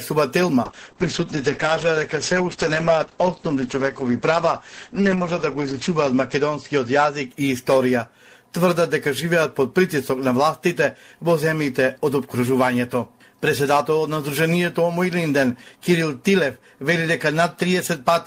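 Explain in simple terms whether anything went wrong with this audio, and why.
A call bitrate drop happened from 0.65 to 7.41 s: the connection seemed to shrink, so the encoder squeezed the sound into far less data for about five seconds. The audio turns rough and muffled, losing its crisp top end above 8 kHz, until quality returns.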